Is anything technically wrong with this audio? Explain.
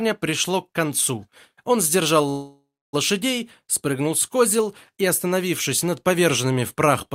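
Yes. A call audio freeze runs from 2.29 to 2.95 s. The last sound is stretched into a fading buzz, then 280 ms of silence. Packets were likely held up, emptying the jitter buffer. Playback resumes where it stopped. Nothing is lost, but everything after arrives 0.64 s late.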